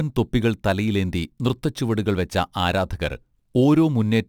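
Throughout the speech, crude rate conversion leaves a gritty, inharmonic fizz, which fits samples being repeated to go from 44.1 kHz to 48 kHz. The error sits about 30 dB below the speech and tracks loud, bright sounds, unlike steady hiss.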